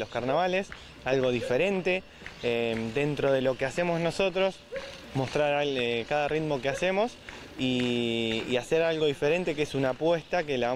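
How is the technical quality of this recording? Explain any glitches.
No glitches or technical faults can be heard anywhere here.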